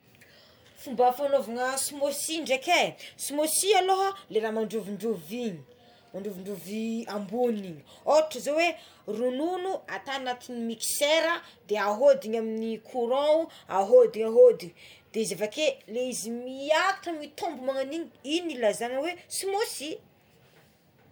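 Speech with generation loss throughout: more swirly and hollow than a single 128 kbit/s MP3 pass, yet still reaching 20.1 kHz, likely from several re-encodes.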